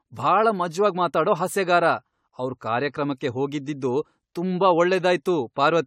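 Throughout the clip, the speech has likely passed through a lossy codec about seven times, causing generation loss; the character points to AAC-LC near 96 kbit/s. Each pass re-quantises on a shifted frame grid, leaving swirly, hollow smearing, blurred attacks, and nothing above 17.8 kHz.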